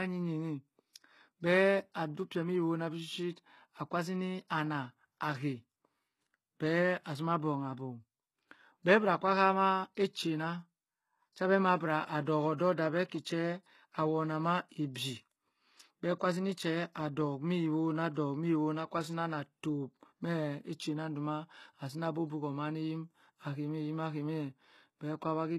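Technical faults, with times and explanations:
Throughout, HE-AAC compression: the speech has treble that sounds bright but synthetic, with sibilants turning gritty and lisping, metallic edges on the upper harmonics, and nothing at all above about 12.3 kHz. The damage is plainly audible. This is likely low-bitrate HE-AAC, consistent with roughly 16 kbps, where only the lower spectrum is truly coded and the top band is regenerated by copying lower bands upward, so its harmonics fail to match the real ones.
14.95 s, pre-echo: a brief hiss, lasting about 10 ms, arrives just ahead of a sharp onset, and the attack itself sounds blunted and smeared rather than crisp. The codec distributes its quantisation noise across an entire transform block; because this transient lands late in its block, noise scaled for the loud attack leaks into the quiet instant before it, where nothing masks it.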